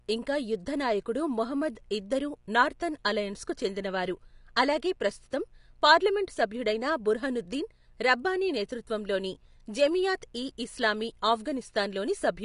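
Speech runs for the whole clip over a steady mains buzz. Its base is 60 Hz. Sharp switching spikes from a dimmer, rectifier or missing shield add harmonics up into the kilohertz range. The result is a raspy buzz, roughly 40 dB below the speech, from start to end. The speech also sounds plainly dull and smeared. Nothing is heard above 10.5 kHz. This points to lossy coding at a low bitrate, likely AAC compression, which fits about 32 kbps. The coder lowered its cut-off and coarsely quantised what remained.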